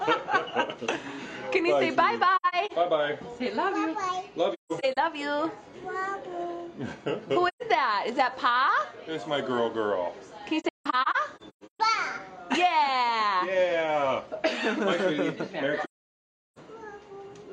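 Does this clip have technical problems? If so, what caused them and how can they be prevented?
Yes, AAC frame loss with muting leaves soft-edged holes at 2.36–2.72, 4.53–4.97, 7.48–7.62, 10.60–11.80 and 15.84–16.59 s. The decoder zeroed the missing frames, so the sound fades out and back in. The first, second and fourth holes are broken up, and the last is one solid gap of about 0.73 s. Adding forward error correction or retransmission on the link would prevent them.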